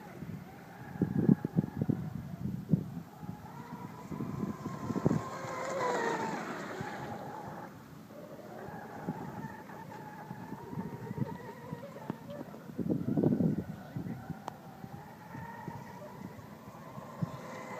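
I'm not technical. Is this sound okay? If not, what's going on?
Yes, it's fine: nothing in it jumps out as a technical problem, so there's nothing here you need to worry about.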